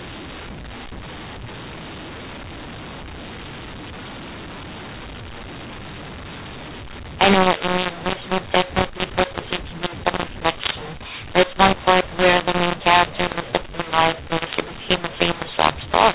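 From start to end, the A-law telephone stream is decoded as mu-law: a mu-law and A-law mix-up. It scrambles levels, making the speech harsh and distorted and filling pauses with noise.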